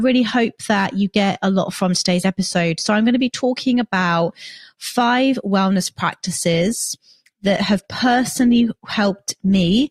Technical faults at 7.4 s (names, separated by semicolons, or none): adaptive stream at a lower bitrate